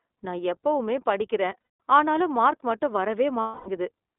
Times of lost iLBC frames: 1.75, 3.40-3.69

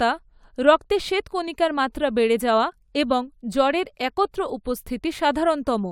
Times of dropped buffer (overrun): none

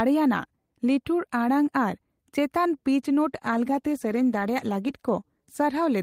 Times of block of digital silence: none

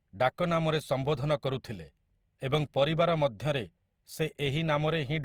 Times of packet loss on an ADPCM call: none

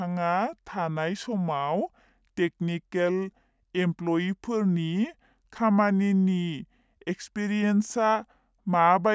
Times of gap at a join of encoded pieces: none

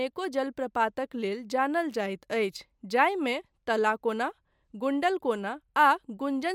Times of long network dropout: none

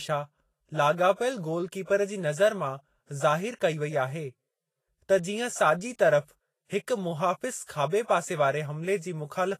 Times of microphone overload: none

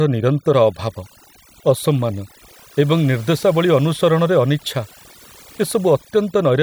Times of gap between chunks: none

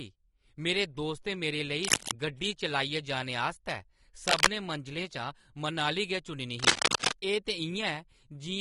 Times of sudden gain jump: none

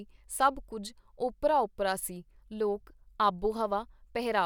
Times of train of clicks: none

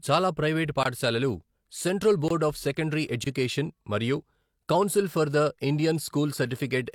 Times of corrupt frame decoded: none

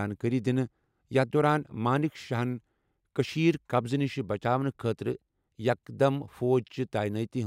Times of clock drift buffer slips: none

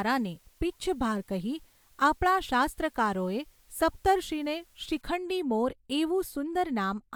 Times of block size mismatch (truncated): none

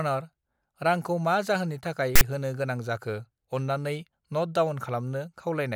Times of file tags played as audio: 2.16-2.21

